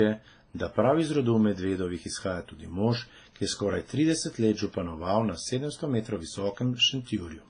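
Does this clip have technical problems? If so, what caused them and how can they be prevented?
Yes. The speech was likely transcoded between lossy codecs, fitting low-rate WMA then AAC-LC, so their artefacts stack throughout, with nothing above 9.6 kHz. Prevent this by encoding once, from the original uncompressed source.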